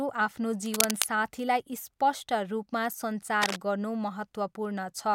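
Cable scratch noise appears from 0.74 to 1.06 s and again from 3.42 to 3.57 s: short, dense bursts of rough, uneven crackle that sit over the speech at roughly the same loudness, like scratching or rustling. The likely cause is a worn cable, connector or control being moved, so that its contact resistance jumps about rapidly and injects these irregular noise bursts into the signal path for as long as the movement lasts.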